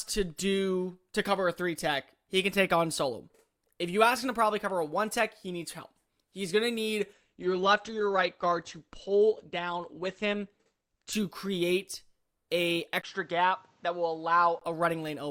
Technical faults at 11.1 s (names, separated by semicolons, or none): adaptive stream at a lower bitrate